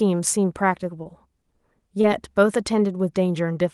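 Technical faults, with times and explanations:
1.03–1.07 s and 2.01–2.05 s, short concealed packet loss: about 20 ms of audio arrived too late to decode. The receiver extended the preceding sound to cover the gap, then crossfaded back into the real signal, leaving a brief smear or wobble.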